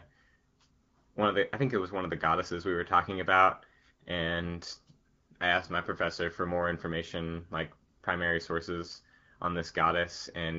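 No technical faults are audible.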